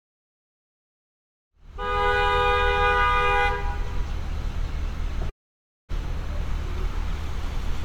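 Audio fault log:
5.29–5.92 s, long network dropout: the sound breaks into a brief buzzy continuation of the last moment that decays quickly, then about 0.57 s of near-silence before the audio resumes with roughly 0.6 s of material missing. This is likely caused by packets ceasing to arrive, leaving the receiver to fill the gap. On a waveform it shows as a collapsing envelope into a flat line; a spectrogram shows a smeared, fading band, then an empty gap with a hard restart.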